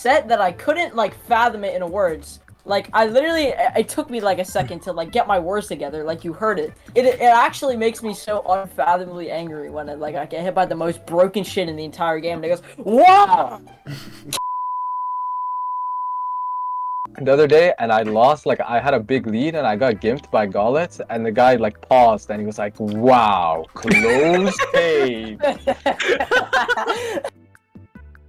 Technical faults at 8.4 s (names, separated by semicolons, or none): repeated packet loss (robotic sound)